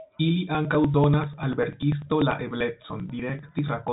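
A steady train of small ticks runs through this telephone-band speech recording, whose sound stops short at about 3.8 kHz. It starts at 0.55 s and continues to 3.88 s, about ten ticks a second, each 0.098 s apart, some forty in all. These are periodic USB or driver dropouts: at that fixed interval the audio path stalls and roughly 2 ms of signal is skipped outright, so each jump in the waveform clicks.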